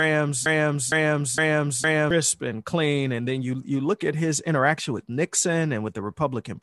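Speech, opening in a broken-record loop: a 0.46 s fragment, already under way as the clip begins, repeats exactly and back to back four times until 2.11 s, just before "and clean and then". The identical repeats and lost audio, rather than a decaying echo, point to a likely stalled player, encoder or stream.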